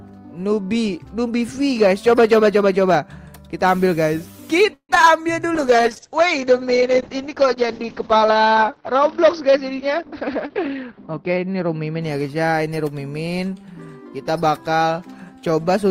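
Several separate network faults affect the audio. From 4.73 to 5.08 s there is repeated packet loss with a robotic sound: four holes in quick succession, the longest about 156 ms, patched by stretching the preceding sound. About half of that span is synthetic fill, and roughly 60 ms more simply drops out. The choppy, mechanical texture and missing fragments set it apart from a codec-rate problem, which degrades sound evenly. Right after, from 5.46 to 5.83 s, a jitter buffer slow-down repeats pitch periods to rebuild a reserve. About 46 ms of audio is added and playback runs at roughly 89% speed. The pitch holds steady while sounds are drawn out, so this is a timing stretch rather than a gap or a tone change. From 5.56 to 12.32 s comes a call bitrate drop. The top of the spectrum disappears, bandwidth falls from the full range to about 6 kHz, and detail turns coarse, which fits an encoder forced from around 32 kbps down to 8 kbps. 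The lowest quality lasts about 5.3 s. Unlike packet loss, nothing goes missing: everything is present but dull and rough. Inside that stretch, from 10.08 to 11.38 s, a jitter buffer speed-up trims short pitch-period slices to reduce excess delay. Roughly 150 ms is removed and the audio runs at about 112% speed, sounding hurried while the pitch stays unchanged. That steady pitch is what separates it from a sample-rate error, and the quickened pace is the mirror image of the earlier slow-down.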